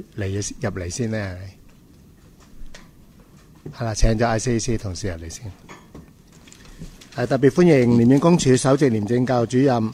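No technical faults can be heard anywhere in the clip.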